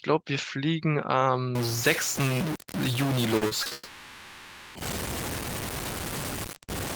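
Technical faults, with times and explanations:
1.55–6.96 s, stuck bit: From 1.55 s to the end, the speech gains a distorted edge, and the pauses stop being quiet and fill with a gritty noise floor. This is most likely one data line held at a fixed value, so about half the samples are off by that bit's weight in a pattern that follows the waveform. Because small values near zero flip sign, the error turns into noise even when little is being said.
3.37–3.73 s, repeated packet loss (robotic sound): Over this 0.36 s stretch the speech turns choppy. Four separate holes, the longest 40 ms, were each patched by stretching out the last bit of sound, 140 ms in total, about 39% of the span. Each patch sits right next to real audio and the next hole arrives soon after, so the speech stutters between real fragments and synthetic fill and takes on a robotic quality.
3.73–4.77 s, long network dropout: Straight after the choppy section, a full 1.02 s of speech is missing, and the gap is filled the whole way, with no true silence. 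The likely cause is that no audio arrived over the link for about a second, so the receiver kept extending the last sound into a buzz or hiss that fades. When the audio resumes at 4.77 s, the missing second does not come back.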